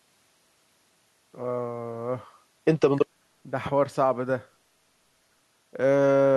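No technical faults can be heard in this speech recording. Nothing goes wrong at any point from the first moment to the last.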